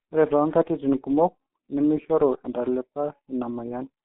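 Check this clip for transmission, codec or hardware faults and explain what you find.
One codec fault runs through the whole clip. Throughout, the speech sounds muffled, hoarse and smeared on consonants. That is the mark of G.723.1 coding, whose narrow line band of 200 Hz to 3.4 kHz and slowly updated 30 ms voice model fit a rate around 6.3 kbit/s.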